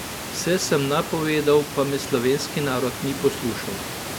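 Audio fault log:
Nothing to log here, just some room sound sitting about 13 dB under the speech.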